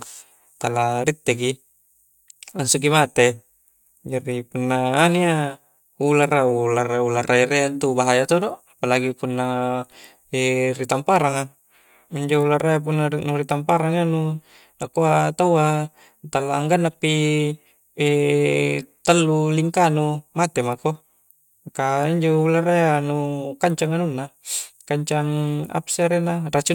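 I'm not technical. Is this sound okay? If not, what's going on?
Yes, nothing wrong can be heard in this recording.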